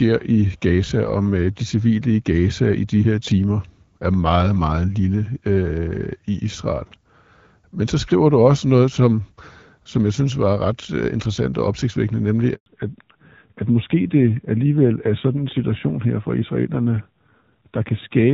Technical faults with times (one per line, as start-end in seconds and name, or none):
12.54-12.66 handover gap
12.66-18.33 fallback to narrowband